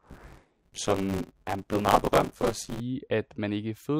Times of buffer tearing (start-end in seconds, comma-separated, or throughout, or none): 0.00-2.80